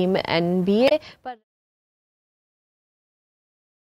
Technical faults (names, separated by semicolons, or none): damaged data in a compressed stream